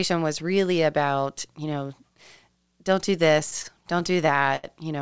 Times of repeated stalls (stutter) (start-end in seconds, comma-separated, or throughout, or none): 3.40-4.65